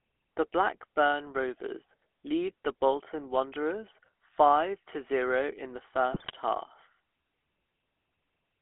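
Throughout, the speech has the buzzy, gravelly roughness of the GSM full-rate codec, which fits 13 kbps coding. The spectrogram shows energy confined between 300 Hz and 3.4 kHz.

From 6.12 to 6.32 s, GSM bit errors corrupt the decoder's filter, pitch and gain values, causing squawks and pops. These appear as smeared spectral bursts and abrupt level spikes in the waveform.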